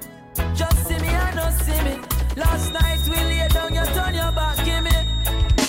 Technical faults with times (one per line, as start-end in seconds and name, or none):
2.53-5.68 feedback whistle